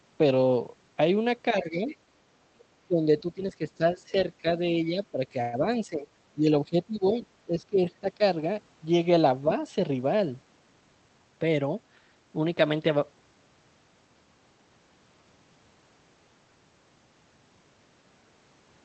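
Speech carried over a call path whose audio is band-limited to about 8 kHz, with speech suppressed in double talk at 1.62–1.89 s, 2.87–4.46 s and 4.88–8.21 s. The level dips by about 10 dB in the first stretch and up to about 15 dB in the later two, affecting roughly 0.3 s, 0.7 s and 1.5 s respectively. The likely cause is an echo canceller ducking the near talker while the far end was also active. At 1.88–1.96 s, just as the first dip ends, the other side's voice leaks through faintly, about 25 dB under the speech, as a brief scrap that the echo canceller likely failed to remove. Inside the third suppressed stretch, a call audio freeze at 5.41–5.55 s fills 117 ms with a fading continuation of the preceding sound. The speech then resumes where it left off, with nothing lost but a 117 ms delay added, most likely from late packets draining the jitter buffer.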